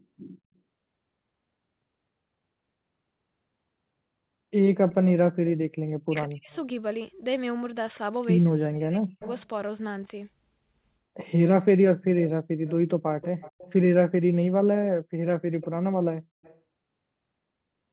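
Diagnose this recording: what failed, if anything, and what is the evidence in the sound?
Echo leak at the call-processing stage: a faint, delayed copy of the speech rides under the talker at 4.9–5.52 s, 6.51–6.6 s, 9.23–9.41 s, 12.22–13.73 s, 15.61–15.67 s and 16.43–16.58 s. It sits about 20 to 35 dB below the direct speech, with a 154 ms lag in the first two and 235 ms afterwards. The likely cause is a far-end echo canceller that did not fully remove its loudspeaker pickup. Reverberation would smear continuously. This is a distinct, repeated copy at a fixed delay, and the step in delay suggests the echo path or canceller alignment changed partway through.

Speech suppressed in double talk, also in call processing: the talker's level falls sharply, by roughly 40 dB at its deepest, over about 6.05–6.51 s and 8.6–9.24 s. It is likely the echo canceller clamping down while both sides spoke at once, unable to separate near speech from echo. 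Packet loss or a buffer dropout would cut abruptly or repeat audio. Here the speech dips and recovers in pieces, and each dip is immediately followed by echo leaking through at 6.51 s and 9.23 s, which ties both to the same canceller.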